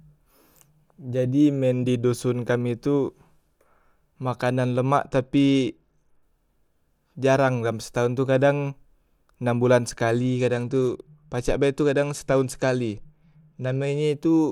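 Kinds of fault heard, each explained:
Bluetooth SBC bit pool drop: The Bluetooth link came under strain, and the sending device cut the SBC bit pool to keep the stream unbroken. The sound fits a fall from a bit pool of 28 to 12, around 96 kbps. With so few bits, the top sub-bands get little or nothing and the rest are coarsely quantised. The speech turns dull and gritty from 5.02 to 6.23 s, and again from 10.10 to 14.01 s, just after "enam bulan".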